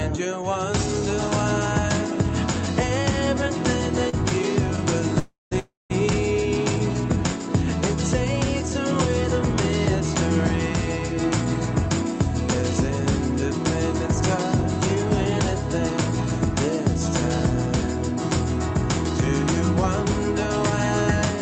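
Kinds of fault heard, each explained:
Short stall from a late packet: At 4.09 s one sound is held for about 37 ms longer than it should be, with a faint buzzy, flattened quality instead of a gap. A packet reached the receiver late, so its jitter buffer ran dry and it stretched the last stretch of audio until the data came in. Playback then resumed from the same point, so nothing is lost, but everything after sits 37 ms later.
Call audio freeze: Two closely spaced freezes, 5.19–5.53 s and 5.59–5.92 s. Each begins with the last sound smeared into a fading buzz that dies to silence for about 0.17–0.18 s before the audio picks up where it left off. The likely cause is packets held up in transit, emptying the jitter buffer. About 0.32 s and 0.31 s are inserted, so the audio falls further behind without losing anything.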